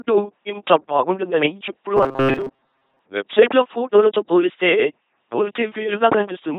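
Speech that has been passed through an LPC-10 vocoder for its whole length, with heavy codec damage. Every instant is rendered either as a pulse-driven buzz or as noise through a ten-pole vocal tract filter, so the voice comes out mechanical and robotic, with stray buzzing or hiss wherever the voiced/unvoiced decision goes wrong. The overall character fits the 2.4 kbit/s LPC-10 scheme. From 1.97 to 2.99 s, between "ఇంత బాగుంటుంటుందని ఎప్పుడూ" and "వెబ్సైట్లో ఫోటోలతో పోలిస్తే", the sound turns into a rigid metallic buzz at 134 Hz that only loosely tracks the speech. This is robotic sound from repeated short buffers. About half of that stretch is repeated material, likely because audio arrived too slowly and the player looped the last buffer while real audio was dropped. The 134 Hz buzz matches a loop period of roughly 7.5 ms, which points to a buffer of that length.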